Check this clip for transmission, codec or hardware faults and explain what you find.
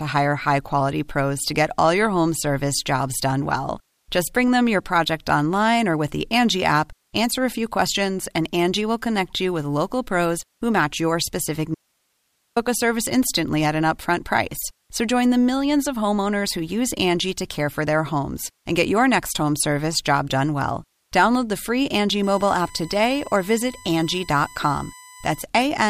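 Two faults turn up in this speech clip: a short dropout and a stretch of USB whine near the end.

From 11.75 to 12.56 s the speech cuts out abruptly for about 0.82 s. This is an audio dropout to a faint residue: the signal is lost while the path after the break keeps running, so the gap holds only hiss, sitting roughly 50 dB below the speech. The hard edges mark it as a likely break in the signal path rather than a natural pause or a fade.

From 22.23 to 25.41 s a steady 1 kHz tone sits under the speech, roughly 25 dB down. That's USB whine: the bus polls in 1 ms frames, and that current draw leaks into the audio through the shared power or ground. The result is a fixed-pitch whine locked to the 1 kHz frame rate.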